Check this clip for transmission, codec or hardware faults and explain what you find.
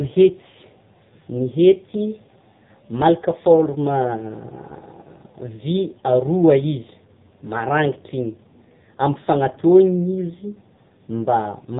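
The speech has passed through the AMR narrowband mobile codec, and the damage runs through the whole clip. Nothing survives above about 3.8 kHz, so sibilants lose their edge and the voice sounds boxed in. The codec rebuilds speech from a vocal-tract model excited by a sparse set of pulses in short 5 ms slices. At a low bit budget, which fits the 5.9 kbps AMR-NB mode, those pulses are spread thin and the rebuilt voice turns heavily buzzy and synthetic. That artificial, gritty texture is what separates it from a simple telephone-band filter, which would cut the highs but leave the remaining sound natural.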